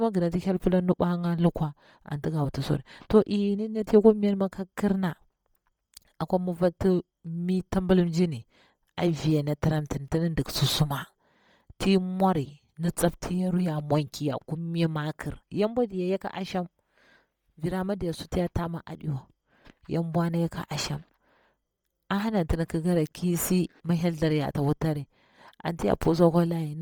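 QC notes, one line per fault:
Throughout, Bluetooth LC3 compression, likely: the upper spectrum is heavily noise-filled, giving speech a grainy, breathy edge rather than a dull cutoff, fitting about 32 kbps.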